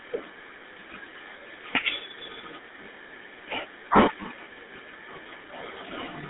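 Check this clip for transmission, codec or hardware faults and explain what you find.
The speech carries one fault from start to finish: GSM full-rate codec damage. It is plainly audible. The codec models the vocal tract as a filter and excites it with a sparse, regularly spaced pulse train. Only a third of the excitation survives, which fits a 13 kbit/s rate. The result is a buzzy, gravelly roughness on the voice. The band runs only from 250 Hz to 3.7 kHz. This leaves the speech thin and boxy.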